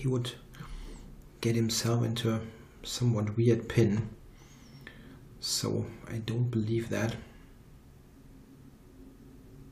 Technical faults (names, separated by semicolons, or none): none